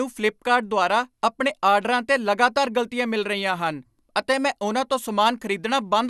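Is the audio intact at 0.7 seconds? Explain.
No. At 0.7 seconds the speech carries generation loss, as it does across the whole clip. It sounds swirly and hollow, with consonant attacks blurred and nothing above 12.6 kHz. The likely cause is repeated lossy encoding, perhaps about three passes, with a character that fits MP2 at 128 kbit/s. Each decode and re-encode quantises again on a shifted frame grid, so noise and spectral gaps pile up beyond what one pass would leave.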